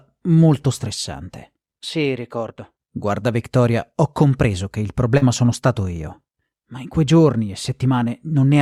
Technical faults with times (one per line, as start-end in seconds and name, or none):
5.17-5.23 short concealed packet loss